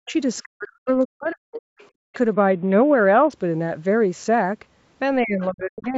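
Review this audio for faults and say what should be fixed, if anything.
Speech suppressed in double talk occurs from 0.03 to 2.12 s and again from 5.21 to 5.95 s. The speech dips by as much as roughly 40 dB and then 35 dB, or drops out in pieces, for about a second in the first stretch and 0.7 s in the second. The likely cause is an echo canceller that could not separate the talker from the far-end echo and turned everything down. Unlike a network dropout, the gaps fall only where the other voice is present. Tuning the canceller's double-talk detection, or using a headset, would prevent it.

The other side's voice leaks through in three short scraps: 0.06 to 0.12 s, 1.79 to 2.17 s, and 5.82 to 5.87 s. The first two sit about 35 dB below the speech and the last about 25 dB below. These are faint fragments of a second talker, likely loudspeaker echo that the canceller did not fully remove. 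Crosstalk on a line would run steadily, but these scraps appear only when the far side speaks. Better acoustic echo cancellation, or lower speaker volume, would prevent it.

A Bluetooth SBC bit pool drop runs from 2.33 to 3.33 s. The treble dulls and a gritty, granular noise rises, then the sound recovers. This fits the link falling from a bit pool of 28 to 7, about 66 kbps, which starves the upper sub-bands and coarsely quantises the rest. A lowpass filter alone would dull the sound without the grit, and the call processing's normal ceiling of 8 kHz is present throughout the clip. Reducing radio congestion or keeping the phone closer would prevent it.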